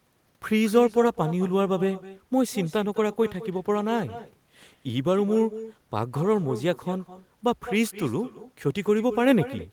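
From start to end, the speech carries an echo with no canceller. A loudspeaker's sound leaks into a microphone unremoved, returning each phrase about a fifth of a second later. The copy sits about 14 dB down, and thinner.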